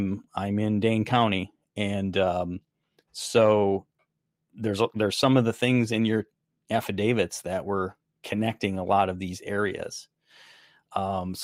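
Small hiccups run through the whole recording, landing at uneven intervals and giving the speech a faintly unsteady pace. This is clock drift between sender and receiver. The sender's audio clock runs about 2% slower than the receiver's, so the jitter buffer keeps draining. The receiver has to fill the gaps rather than let playback run dry, and that mismatch produces the recurring timing stumbles.

From 0.04 s to 11.01 s, the speech sounds slightly dragged, with slight hiccups. These are repeated timing corrections. To keep pace with the slower sender, the receiver repeatedly duplicates small slices of audio. Every edit goes the same way, lengthening the sound, and overall playback runs at 98% speed. Across the stretch the repeats add roughly a fifth of a second.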